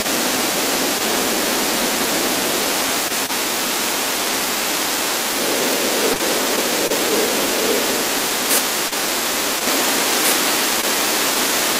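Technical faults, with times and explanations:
6.13–6.17 s, 6.87–6.92 s, 8.88–8.93 s and 10.81–10.85 s, short concealed packet loss: gaps of about 20 ms, 40 ms at 8.88 s, arrived too late, so the decoder stretched the preceding sound and crossfaded back, leaving quick smears or wobbles where a consonant can drop out.
9.67 s to the end, doubled audio track: a second, full-band copy of the speech comes in abruptly, roughly two seconds behind and about as loud as the original, with no reverb tail. It's likely a slower second capture path mixed in.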